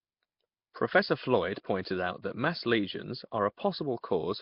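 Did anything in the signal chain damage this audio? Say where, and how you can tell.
Yes, at the codec stage, likely Nellymoser compression. Throughout, the speech carries a rough, hissy halo and a smeared, underwater character, with nothing above 5.3 kHz. Bands starved of bits are refilled with noise, and the heavy damage fits a rate near 22 kbps.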